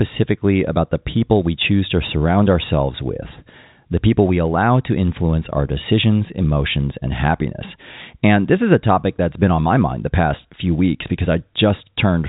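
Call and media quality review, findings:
Nothing stood out on listening to this speech over the G.711 telephone coding path.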